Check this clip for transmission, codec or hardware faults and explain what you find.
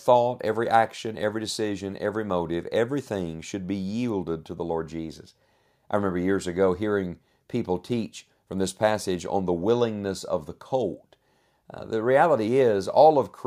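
No faults can be heard in this speech.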